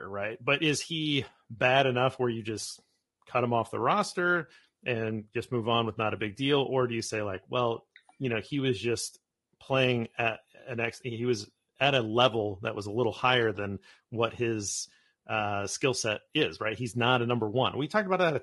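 Low-delay AAC compression runs through the whole speech clip, from start to finish, and its damage is plainly audible. The voice has a rough, grainy texture, and the harmonics lack clean definition. The likely cause is AAC-ELD, the low-delay AAC used for video calls, at a setting whose sound fits a rate around 32 kbps. Its very short frames cannot separate closely spaced pitch harmonics well, and at that low bitrate too few bits remain to render the voice cleanly.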